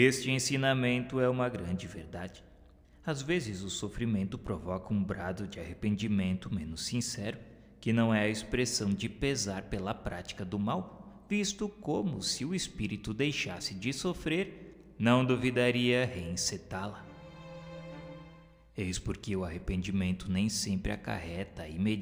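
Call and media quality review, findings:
Crude rate conversion throughout: gritty inharmonic fizz tracking loud and high content, roughly 30 dB down. Unfiltered linear interpolation, consistent with a 32 kHz to 48 kHz resampler.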